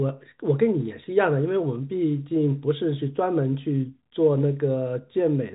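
Nothing stood out on listening to this speech recording, which has the narrow band of G.711 telephone coding, with nothing above about 3.8 kHz.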